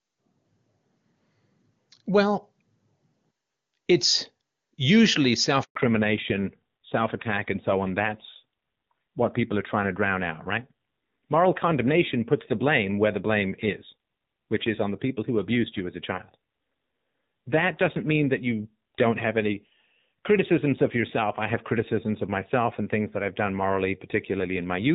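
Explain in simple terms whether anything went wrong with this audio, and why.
Yes, two things went wrong. First, a handover gap: at 5.63 s the call was passed from one network to another, and for about 120 milliseconds, until 5.75 s, no sound got through. The speech cuts out briefly there, and whatever was said in that instant is lost.

Second, a fallback to narrowband: once the call resumed at 5.75 s, it no longer used HD Voice and switched to an older, lower-quality phone codec. From then to the end, nothing above 4 kHz remains, so the speech sounds duller and rougher than the clearer HD Voice audio before the switch.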